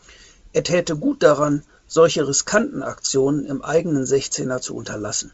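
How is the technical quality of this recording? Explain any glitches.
Nothing stood out on listening to this speech recording, which carries the band-limited character of G.722 wideband telephone coding at 64 kbit/s with nothing that registers as a glitch.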